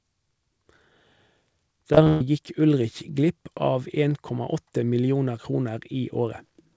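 From 1.93 to 2.21 s, repeated packet loss (robotic sound) leaves four gaps, the longest 130 ms, patched by extending earlier audio, so the speech turns choppy and robotic.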